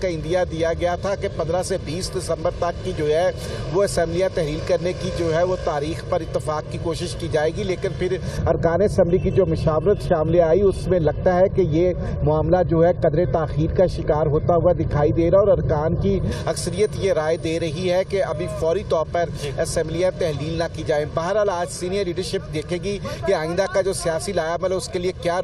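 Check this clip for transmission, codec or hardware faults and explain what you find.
One fault is present. From 8.37 to 16.32 s, de-emphasis applied wrongly: a treble cut with no matching boost drops 10 kHz about 11 dB below 1 kHz, so the sound turns dull and muffled.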